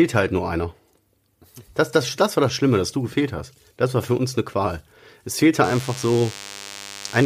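From 5.64 s to the end, DECT cordless phone buzz: a nearby DECT phone or base station's 100 Hz radio bursts get rectified, giving a thin, harmonic-rich buzz well under the speech.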